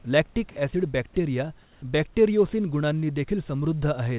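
From 1.62 to 1.82 s, the real room background drops out for 200 ms and is replaced by steady, featureless hiss at the same level, about 32 dB below the loud parts. This is likely comfort noise in place of the background, generated while transmission paused.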